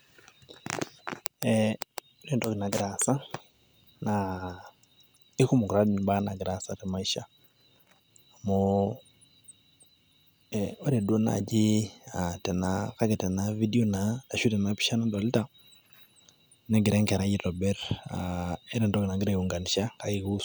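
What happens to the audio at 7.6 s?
At 7.6 s the speech continues cleanly, with no dropout, click, distortion or other audible disturbance.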